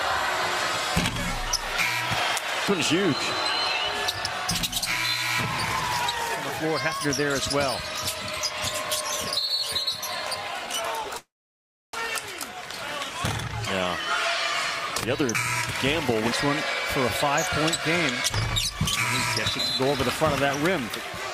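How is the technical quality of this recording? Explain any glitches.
The recording has clear network-delivery glitches: a brief stutter, one long freeze, and two stretches where the audio runs slightly fast.

From 9.41 to 9.58 s there are repeated stalls (stutter). The jitter buffer ran dry three times, the longest gap about 10 ms, and each gap was filled by extending the last sound, about 28 ms in all. Nothing is lost, but roughly a sixth of that short span is patched, so the audio catches and drags. Unlike a freeze, the interruptions are too short to fade into silence.

From 11.17 to 11.94 s there is a call audio freeze. The sound hangs and then fades out, and about 660 ms of that span is silent. The likely cause is packets held up in transit, leaving the receiver with nothing to play for about 762 ms. Playback then resumes where it stopped. Unlike the stutter, this is one long hole that decays to silence, and the audio after it now runs about 0.76 s later.

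From 15.25 to 16.18 s, and again from 18.30 s to the end, there is jitter buffer speed-up. To work off accumulated delay, the receiver cut many tiny pitch-period slices, roughly 50 ms in the first stretch and about 150 ms in the second. The audio runs at 105% and then 104% speed with the pitch unchanged, so the first stretch sounds slightly hurried rather than higher. That unchanged pitch is what separates this from a simple playback-rate error.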